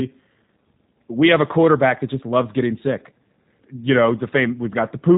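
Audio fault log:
Throughout, G.729 codec: the speech has the slightly rough, synthetic texture of a low-rate model-based coder, which fits G.729A at around 8 kbit/s. Rather than storing the waveform, the codec rebuilds each short frame from a vocal tract filter, a pitch predictor and a few sparse pulses, so fine detail between those pulses is lost. The damage is plainly audible, and nothing reaches above 3.8 kHz, leaving the sound narrowband and dull.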